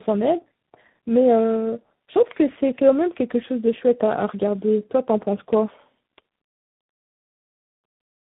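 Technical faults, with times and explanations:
Throughout, tandem speech coding: the speech sounds rough, muffled and warbly, with nothing above 3.8 kHz. The character points to three speech coders in a row, consistent with ADPCM stages such as G.726 on either side of a low-rate CELP coder like G.729A. Each border decodes and re-encodes audio the previous coder has already damaged, so quantisation noise and spectral smearing pile up beyond what any single link would cause.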